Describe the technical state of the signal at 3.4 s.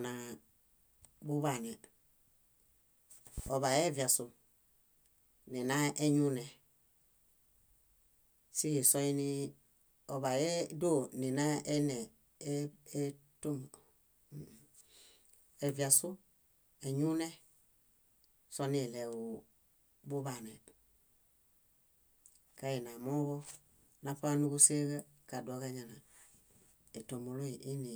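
Two sharp pops in quick succession sit on top of the speech between 3.38 and 3.50 s, peaking at about 5 dB above the level of the talking, which continues underneath without a break. This is a loud pop fault, likely caused by a sudden voltage step or pulse entering the signal path, from a plug, a switch, static discharge or a driver glitch, and then being shaped by the circuitry that follows it.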